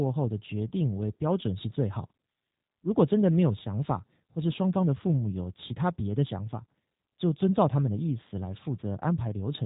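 Throughout, the speech has passed through a G.729 codec, likely an 8 kbit/s VoIP link, leaving it band-limited below 4 kHz, slightly rough and plainly synthetic.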